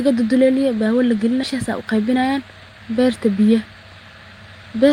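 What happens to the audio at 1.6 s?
A jitter buffer speed-up runs from 1.54 to 2.80 s: the receiver trims short pitch-period slices, roughly 150 ms in total, so the speech plays about 11% faster at unchanged pitch. The spectrogram shows harmonics at steady spacing, with syllables compressed in time.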